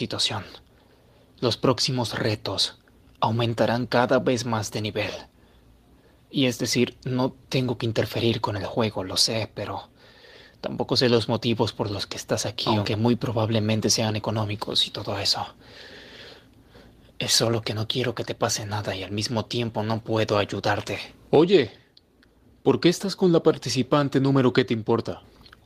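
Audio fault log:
No audible faults anywhere in this recording.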